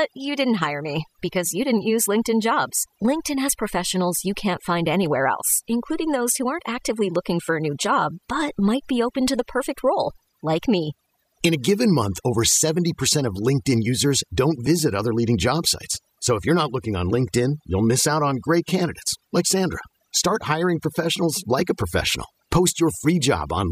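A speech recording with overdone noise removal running the whole way through. The denoiser was clearly set too hard: any frequency band that drifts close to its noise estimate gets pushed right down or switched off, and the softer parts of the voice get caught along with the noise. So the gaps fall to near silence dotted with little twinkling specks.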